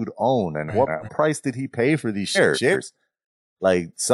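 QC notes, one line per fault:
0.68–1.09 s and 2.35–2.76 s, frames out of order: in each span two adjacent blocks of about 186 ms play in swapped order, so the later stretch of speech is heard before the earlier one. The result is a garbled, fluttering jumble. Each block length points to runs of four codec frames decoded in the wrong sequence. No time is lost.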